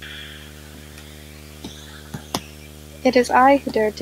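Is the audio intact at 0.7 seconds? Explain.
No. At 0.7 seconds the speech carries video or display buzz, present throughout the clip. A screen or video cable is coupling into the audio path. It adds a 75 Hz buzz at the picture's field rate, with hash above it, about 25 dB below the speech.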